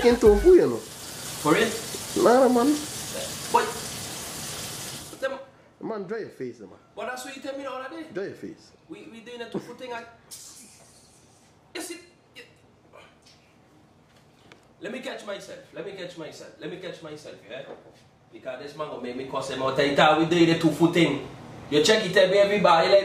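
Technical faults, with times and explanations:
4.88–5.49 s, zipper noise: the level comes down roughly 15 dB in unsmoothed 2 dB steps, around fifteen a second. Each jump leaves a tiny click in the waveform, so a fast ticking zip rides on the sound while it fades.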